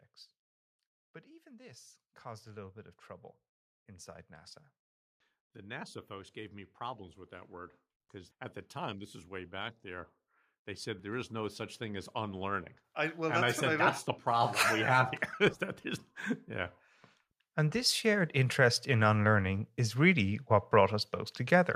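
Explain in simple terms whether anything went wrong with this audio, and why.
Yes, one thing goes wrong. From 17.54 to 19.77 s, just before "is really what", automatic gain rising sets in: the recording's level control judged the input too quiet and slowly turned itself up. Unlike someone simply speaking louder, the background swells along with the voice.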